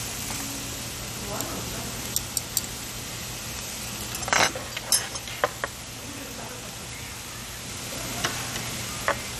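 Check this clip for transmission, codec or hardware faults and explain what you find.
One fault runs throughout: likely MP2 compression at a low rate, fitting roughly 64 kbps. Upper sub-bands are starved of bits, so nothing remains above 14.3 kHz. Coarse quantisation leaves the sound dull and gurgling. A spectrogram shows a hard 14.3 kHz ceiling with patchy upper bands.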